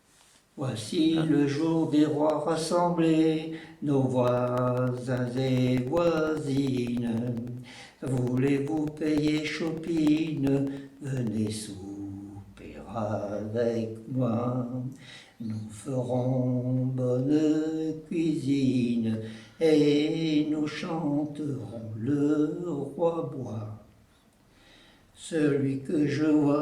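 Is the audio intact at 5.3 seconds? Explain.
No, 5.3 s sits inside a stretch of periodic USB or driver dropouts running from 4.28 to 11.47 s. Every 0.1 s something stalls the audio path and about a millisecond is replaced by silence, so you hear a steady ten-per-second ticking wherever there's signal.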